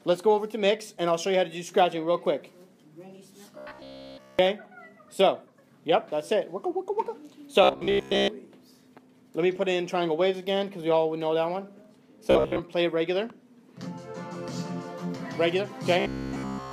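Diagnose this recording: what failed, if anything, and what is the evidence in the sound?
Robotic sound from repeated short buffers appears at 3.58–4.39 s, 7.63–8.28 s, 12.31–12.61 s and 16.0–16.72 s. A rigid metallic buzz at 66.7 Hz, fixed whatever the underlying pitch, fills all of the first and last stretches and most of the middle two. That fits one 15 ms block being looped while fresh audio is skipped, likely a driver or buffer starving. A dropout would go silent and a codec would warble, but this buzz holds one steady frequency.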